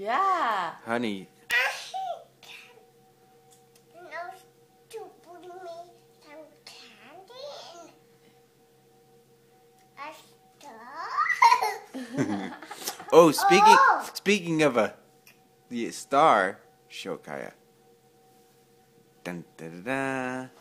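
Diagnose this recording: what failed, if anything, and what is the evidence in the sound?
Two isolated sharp ticks stand out, one at 1.51 s peaking at about -8 dBFS and a quieter one at 14.07 s at about -14 dBFS. Each is a bare click, broadband and instantaneous, with no relation to the surrounding sound. This is a bit error spike from the digital path, in memory, storage or a digital link. A flipped bit throws a sample, or a pair of samples, off by a power of two before the waveform immediately snaps back.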